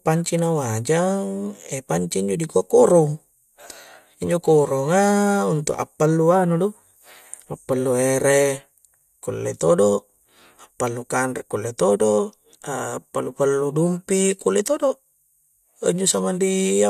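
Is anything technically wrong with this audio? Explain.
No, nothing technically wrong can be heard in this speech recording. No faults turn up anywhere in the clip.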